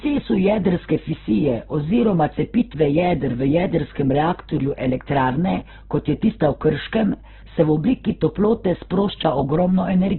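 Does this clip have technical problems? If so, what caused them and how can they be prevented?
Yes. Opus compression damage runs through the whole speech clip, from start to finish. Nothing is heard above about 4.1 kHz, so the speech is narrowband, and the remaining spectrum sounds rough and grainy rather than swirly. That is the likely cause: Opus in its music mode, at a bitrate that sounds close to 8 kbps, keeps each band's energy but fills starved bands with folded copies or noise. To prevent it, encode speech at a higher Opus bitrate.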